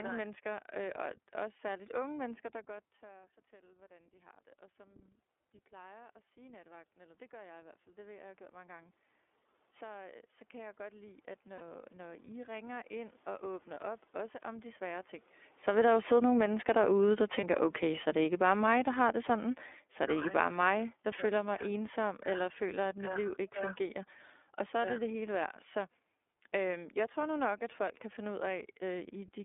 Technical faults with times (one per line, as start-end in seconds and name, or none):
0.00-29.45 iLBC codec
11.57-11.61 lost iLBC frames
13.74-13.78 lost iLBC frames
15.58-25.45 automatic gain falling
17.40-17.44 lost iLBC frames